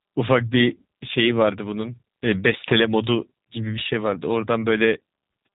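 From start to finish the speech sounds slightly rough, buzzy and synthetic, with nothing above 4 kHz, the plainly audible mark of the G.729 codec, which fits an 8 kbit/s stream rebuilding each 10 ms frame from a vocal tract filter, pitch predictor and a few pulses.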